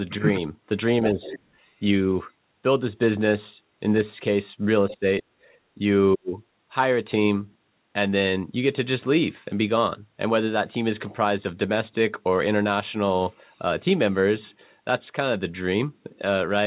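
From 1.14 to 1.22 s the talker dips by roughly 10 dB, likely speech suppressed in double talk: the echo canceller, hearing both sides at once, turns the talker down too. A faint second voice follows from 1.22 to 1.4 s, roughly 15 dB under the talker. This is likely the other side's voice leaking through as residual loudspeaker echo. It is an added voice, not a loss. At 1.5 to 1.54 s the room tone alone drops by about 7 dB. This is background gated by the echo canceller, and it differs from double-talk suppression because no speech is cut. The pattern repeats. Speech dips roughly 20 dB from 4.9 to 5.05 s, with leaked echo at 4.91 to 4.96 s. The background gates by about 14 dB from 5.34 to 5.46 s. Speech is suppressed again at 5.75 to 5.8 s (roughly 10 dB) and from 6.15 to 6.36 s, where it nearly vanishes at roughly 40 dB down. Throughout, the call path's G.711 mu-law coding leaves nothing above 4 kHz.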